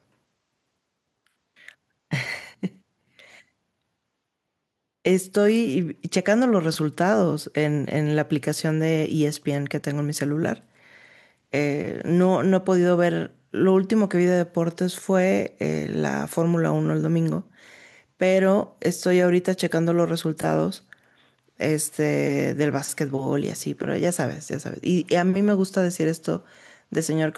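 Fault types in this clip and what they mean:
The speech signal stays steady and unbroken throughout, with no audible technical fault at any point.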